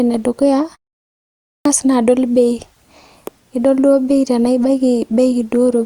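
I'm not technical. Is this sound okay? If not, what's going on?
No. At 1.11 s, right after a short pause of about 0.43 s, the speech comes back abruptly with its beginning missing; about half a second is swallowed, up to 1.65 s. This is a clipped start after a pause: the playback device dozed off during the quiet and took too long to wake.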